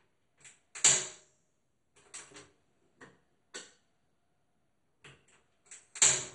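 A recording of everyday sound, dull and gurgling throughout with heavy granular distortion and nothing above 11.2 kHz. This is likely MP2 compression at a low rate near 56 kbps; a spectrogram shows a hard ceiling with flickering upper bands. Hard clipping from 6.02 to 6.07 s, overdriven by about 4 dB, adds crackle on peaks, and the waveform shows flattened peaks there.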